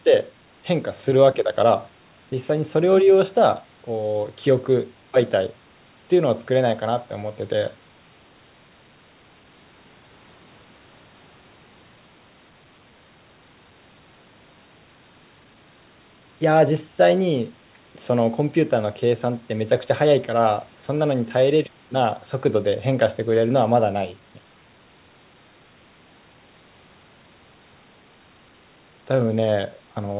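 No technical faults can be heard anywhere in the recording. The speech has the narrow, telephone-like sound of a G.711 A-law call path at 64 kbps, with nothing above 4 kHz.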